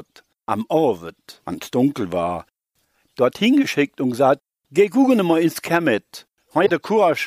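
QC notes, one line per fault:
6.65–6.70 s, broken MP3 bit reservoir: about 50 ms of mangled sound where the audio lurches forward. Likely some frames were dropped, so the next ones pulled their borrowed bits from the wrong frame's bytes. The span fits two 26.1 ms frames decoding as garbage.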